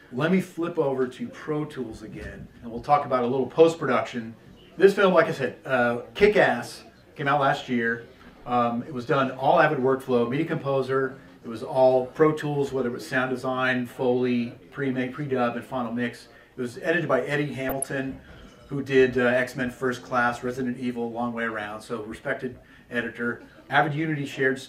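From 17.68 to 17.88 s a brief burst of burbling rises over the sound: DAB burbling. Weak reception let bit errors slip past error correction into the MP2 data, and corrupted samples put short noise blips in single sub-bands.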